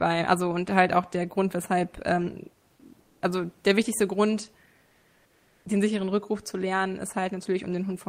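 At 3.01–3.21 s, after "weshalb ähm", and 4.85–5.65 s, before "den sicheren", comfort noise replaces the background, likely from Opus DTX. The room hiss turns steady and featureless at nearly the same level, about 40 dB below speech, instead of falling silent as gating would.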